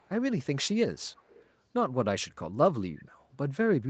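A short speech recording carries a faint echo leak, a delayed copy of the talker trailing about 0.35 s behind, very quiet from 0.00 to 0.09 s and stronger but still soft (around 30 dB down) from 0.97 to 1.49 s. This is most likely a far-end loudspeaker's sound escaping an echo canceller. Unlike room reverberation, which smears continuously, this returns as a distinct, fixed-delay repeat in isolated bursts.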